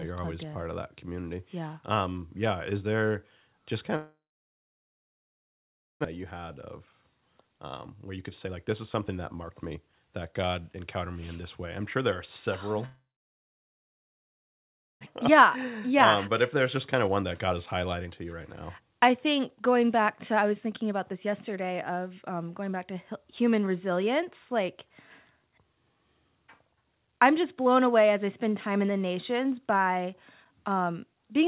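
A speech recording carried over a G.711 mu-law call path, with nothing above 4 kHz, that has two long network dropouts. From 3.96 to 6.07 s and again from 12.86 to 15.09 s, the last sound is stretched into a fading buzz or hiss, then gives way to roughly 1.8 and 2.0 s of silence. When the speech returns, about 1.6 s of it is simply gone. The likely cause is packets that stopped arriving and were never recovered. A brief glitch would leave a short gap and keep the following speech in place, whereas here the concealment fades out and then the audio skips ahead. The next stretches are jitter buffer speed-ups: 7.67 to 11.03 s at 112 %, removing around 0.4 s; 15.29 to 17.54 s at 107 %; 17.98 to 18.39 s at 135 %; and 18.80 to 21.99 s at 107 %. The receiver trims small pitch-period slices to work off a backlog of buffered audio, so the talking sounds hurried. Because the pitch stays the same, this is distinct from a sample-rate mismatch, which would raise the voice as well. 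Finally, at 30.45 s a block of digital silence lasting 5.33 ms, which fits a 256-sample buffer going unfilled, produces a tick or dip. The sound switches off and on instantly with no fade, unlike loss concealment.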